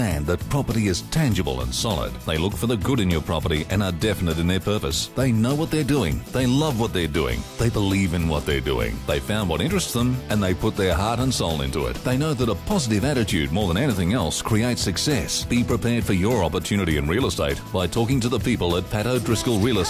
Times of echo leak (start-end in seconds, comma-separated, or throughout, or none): none